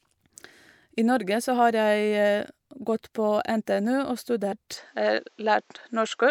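At 4.51 s there is a single brief glitch, the sign of damaged data in a compressed stream. A short run of corrupted bytes left the decoder unable to read the frame, so it lost sync and jumped ahead to the next valid frame header. The result is a blip lasting about 18 milliseconds that doesn't recur.

From 4.77 s to the end, the tone turns duller and more closed-in. The likely cause is that the input switched to a poorer device. Everything above about 7.9 kHz vanishes. There is no silence at the change and no jump in loudness, and a new, faint background noise appears far below the signal. A low-pass filter or EQ change would alter only the frequency balance, but here the noise floor changes along with the bandwidth, which points to different hardware taking over mid-recording.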